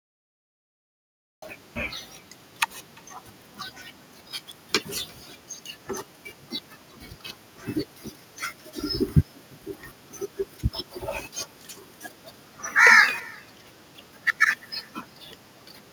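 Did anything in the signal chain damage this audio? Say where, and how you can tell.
Yes. Call processing failed: echo with no canceller. The far end's loudspeaker feeds its microphone. A faint copy, about 28 dB down, trails the talker's speech by roughly a third of a second.

A cut-off start at the recording stage. The file holds digital silence until 1.42 s. Then speech begins abruptly mid-sound, with no attack, because capture started late.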